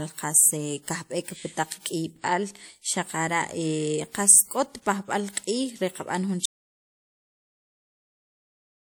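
At 5.32 s a short hiss creeps in just ahead of a sharp onset and lasts about 49 ms until 5.37 s, leaving the attack softened. This is pre-echo: the transform codec spread quantisation noise across the whole block, so noise meant for the loud onset leaked into the quiet moment before it. From 6.46 s to the end the speech cuts out to silence, with no room tone at all. This audio dropout to silence was likely caused by the input being lost while the recorder kept writing silence.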